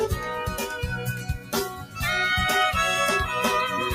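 Throughout, the sound pumps and thins, with held parts and tails sinking by roughly 10 dB while attacks pass: a noise suppressor applied to music or sounds, treating steady material as noise. From 1.12 to 1.53 s and again from 1.69 to 2.01 s, sound cut by the noise suppressor drops by about 11 dB, its sustained portions pulled down for a few tenths of a second.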